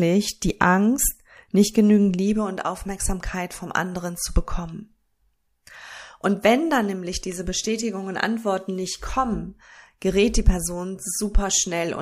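No technical faults can be heard anywhere in the recording. There is nothing in the speech that needs a timestamp or further comment.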